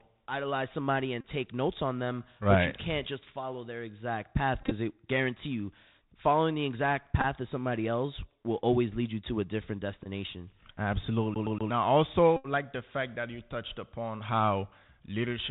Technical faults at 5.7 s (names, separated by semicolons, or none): Bluetooth CVSD headset codec